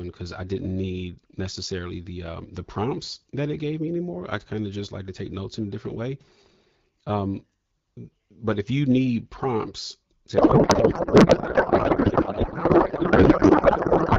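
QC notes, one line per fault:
10.37–14.18 s, codec payload misread: right after "you need prompts to", the speech becomes garbled noise and warble that barely tracks it, continuing to the end. The AMR-WB frames were packed octet-aligned but decoded as bandwidth-efficient, so every field lands in the wrong bits.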